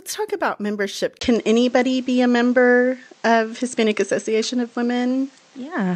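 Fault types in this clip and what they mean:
Input switched to a poorer device: the recording input likely changed at 1.19 s, so after a 20 ms gap the sound turns dull, cut above 8.6 kHz, with new faint noise.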